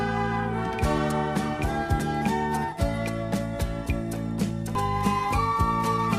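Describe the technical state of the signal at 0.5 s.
At 0.5 s the signal is intact, with no dropout, distortion, noise or other technical fault to be heard.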